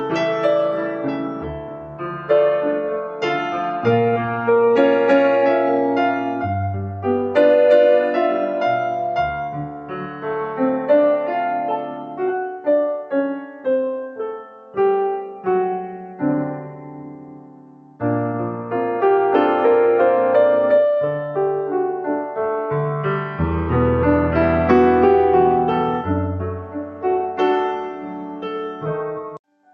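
A noise suppressor built for speech was left active on this sound, and it keeps treating steady tones, ambience and decaying tails as noise. Through the whole clip it pulls those parts down by roughly 10 dB while sudden onsets pass, so the level pumps and the sound thins between attacks. The audio also carries the coding noise of a call codec, likely Opus, with its top end stopping near 8 kHz.

Eight times the sound cut by the noise suppressor is pushed well below its surroundings, at 0.81–2.3 s, 9.32–10.26 s, 11.78–12.67 s, 13.03–13.66 s, 14.09–14.76 s, 16.72–18.01 s, 26.53–27.4 s, and from 27.75 s to the end. Each time the suppressor judges held or fading material to be noise and drops it by about 8 to 9 dB, so sustained parts sag and tails are cut short while sharp onsets still come through.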